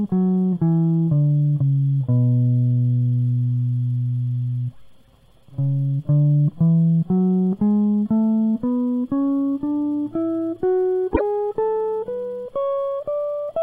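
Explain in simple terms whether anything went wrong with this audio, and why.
Part of the compressed MP3 stream was most likely lost, which points to a broken MP3 bit reservoir. MP3 frames store some of their data in earlier frames. When frames go missing, the next frame reaches back for its data and reads the wrong bytes instead. At 11.13 s the music jumps ahead, and for about 0.08 s, until 11.21 s, the sound is disrupted before the music continues.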